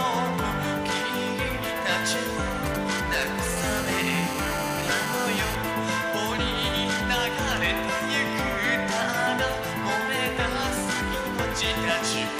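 From 2.66 to 3.47 s, a nearby 2G handset is exchanging short signalling bursts with the network, and the audio circuitry rectifies those radio pulses into the signal path. The result is GSM signalling bursts: a galloping dit-dit-dit of brief buzzes clocked at about 217 Hz, sitting roughly 10 dB under the wanted sound and breaking up into separate clusters.

From 3.57 to 5.55 s, a phone is in a call and now transmits continuously in bursts 217 times a second, which the circuit again demodulates. This is GSM phone buzz: a nearly steady, raspy 217 Hz drone dense with harmonics, about 10 dB below the signal and wholly unrelated to it.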